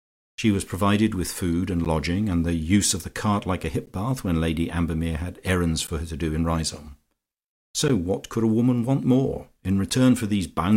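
Speech with a gap between chunks, heard five times. Short holes of 12 ms fall at 1.85, 3.86 (after "the cart like a"), 5.87, 7.88 and 9.9 s, every 2 s. Each chunk seemingly starts late, leaving silence at every join.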